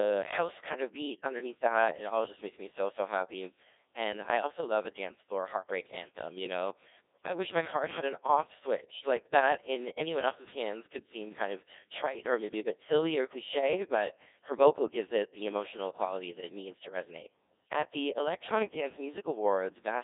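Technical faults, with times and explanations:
Throughout, Codec 2 vocoder: the speech is resynthesised from pitch, voicing and a coarse spectral envelope, so it sounds heavily robotic and buzzy, which fits about 1.6 kbit/s. A spectrogram shows rigid synthetic harmonics from 300 Hz to 3.7 kHz and nothing above 3.8 kHz.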